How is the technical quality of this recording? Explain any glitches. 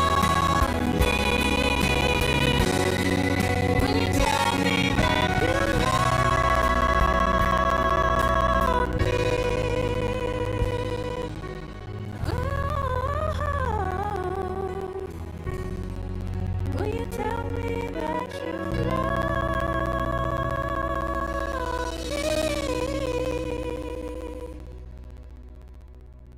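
The quality is compromised by one persistent glitch running through nearly the whole recording.

From about 0.09 s to 26.33 s there are periodic USB or driver dropouts. Every 64 ms, roughly 15 times a second, something blocks the USB bus or audio driver, and around 10 ms of audio goes missing, replaced by silence. That adds up to hundreds of tiny holes, heard as a steady ticking or popping that rides along wherever the sound is present.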